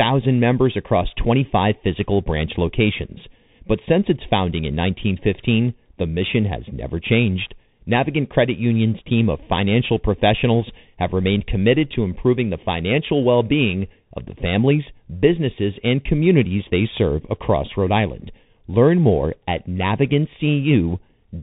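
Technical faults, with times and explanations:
throughout, channel delay (comb filtering): The speech sounds hollow and phasey, with a fixed dip around 1.5 kHz and further notches evenly spaced above it. One channel trails the other by roughly 0.4 milliseconds, so summing them to mono cancels shared content at those frequencies.
throughout, Bluetooth CVSD headset codec: Everything above 3.8 kHz is missing, s sounds come out scratchy, loud bright passages distort, and a granular hiss sits under the speech. This fits a 64 kbps CVSD headset link, whose one-bit adaptive steps cannot track fast, high-frequency movement.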